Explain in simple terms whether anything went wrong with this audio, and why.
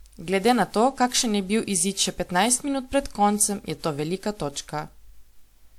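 Throughout the speech, the sound is swirly and hollow, and the starts of sounds are smeared. That is generation loss, likely from the audio being squeezed and unpacked again with a lossy codec, probably WMA, around seven times, so each pass added more damage.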